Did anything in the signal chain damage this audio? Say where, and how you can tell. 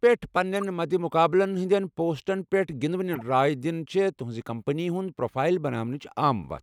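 Yes, at the codec stage: two bursts of corrupt frame decoding. From 0.55 to 0.63 s, and again from 3.13 to 3.22 s just before "راے دِنہِ چھے٘ تٗہنزِ", a burst of misplaced energy peaking around -20 and -25 dBFS spans roughly four frames. Flipped bits made the decoder rebuild those frames with wrong gains and codes, putting energy at unrelated frequencies. Unlike packet-loss concealment, which smears or repeats the surrounding sound, these bursts add new, alien sound.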